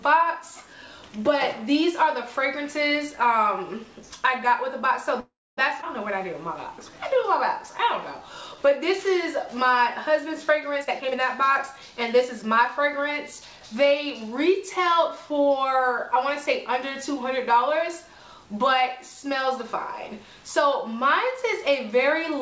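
From 5.20 to 5.59 s the audio halts for about 375 ms. This is a call audio freeze, likely caused by packets stalling in transit until the jitter buffer ran dry. The last sound is carried on as a decaying fill, which drops to silence for roughly 260 ms. Playback then resumes where it stopped, with nothing lost.

At 5.81 to 5.85 s there is a skip ahead. About 150 ms of audio is dropped while later packets were already queued. The two sides are butted together with only a brief join, so the sound jumps forward abruptly.

Two jitter buffer slow-downs follow. From 6.11 to 7.28 s playback runs at 96% speed, adding 53 ms. From 7.70 to 9.79 s it runs at 95%, adding 104 ms. In both, the receiver rebuilt its reserve by repeating single pitch periods, so the sound drags and stretches while the pitch stays the same.

From 10.81 to 13.61 s a jitter buffer speed-up runs the audio at 114%, trimming about 400 ms. 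The buffer held more than its target, so short pitch-period pieces were cut out in succession. The sound is audibly hurried at unchanged pitch. Throughout, the band stops at 8 kHz, consistent with a G.722 call codec.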